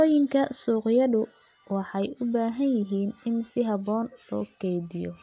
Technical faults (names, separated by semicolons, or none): none